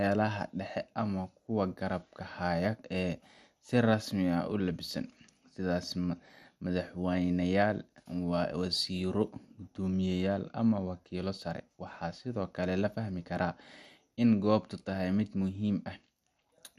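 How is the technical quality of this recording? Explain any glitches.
The recording is held back by audible codec damage that runs for the whole clip. The speech is dull and has a gurgling, granular edge, which is most likely MP2 compression. The audio is split into 32 sub-bands, each given a share of a tight bit budget. Upper bands drop out, leaving nothing above 15 kHz, bands flicker on and off, and the bands that remain are quantised coarsely. The level of damage fits a low rate of around 80 kbps.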